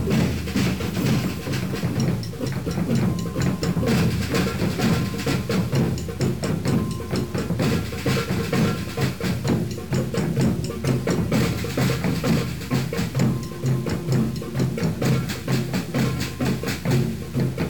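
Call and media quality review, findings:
Low bit depth without dither, throughout: grainy, signal-following distortion. Likely 6-bit truncation, error about 25 dB below signal. Waveform shows visible stair-steps; spectrogram shows broadband grit tracking level.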